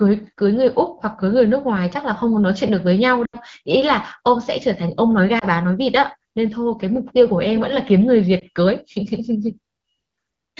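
Speech with brief dropouts: at 3.26 to 3.36 s the sound drops toward silence, consistent with about four lost frames, and at 5.39 s and 8.39 s there are short dips. These are lost AMR speech frames, where the wideband decoder patches errored frames by repeating the last good settings at falling gain.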